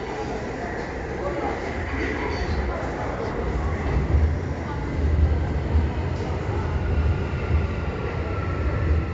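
No technical faults can be heard anywhere in this recording of sounds. Nothing in it stands out as a playback or capture problem.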